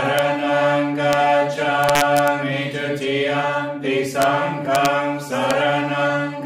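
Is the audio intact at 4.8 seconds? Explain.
No. Integer overflow hits from 4.75 to 4.86 s: peaks pushed only about 1 dB past the integer limit wrap around to the opposite sign instead of being held, so each one flips across the full range and produces violent cracks far sharper than ordinary clipping.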